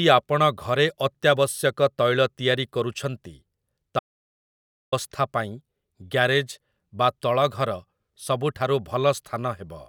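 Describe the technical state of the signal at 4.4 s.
At 4.4 s the speech sits inside an audio dropout to silence from 3.99 to 4.92 s, likely a lost input written as silence: a flat waveform and blank spectrogram, no room tone.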